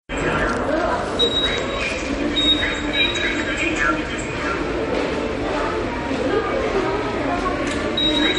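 Throughout, the audio is band-limited with nothing above 10.6 kHz, and weak detail swirls and flickers with a watery, metallic edge. The likely cause is MP3 compression at a starved bitrate, near 40 kbps, forcing the encoder to drop treble and quiet frequency lines.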